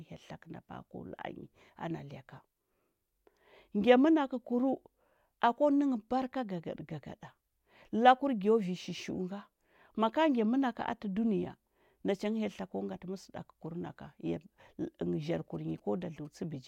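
From 15.22 to 16.27 s, GSM signalling bursts from a nearby phone, rectified by the circuit, gallop as short 217 Hz buzzes well below the speech: spectrogram shows groups of vertical stripes.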